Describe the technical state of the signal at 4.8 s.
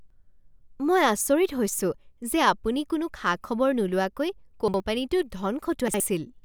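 At 4.8 s the signal is just leaving a chunks-out-of-order fault spanning 4.68 to 4.8 s: a 60 ms chunk arrived one chunk late and plays after its successor. Unlike a dropout, nothing is missing; the swapped order leaves a brief jumbled stretch bounded by three hard joins.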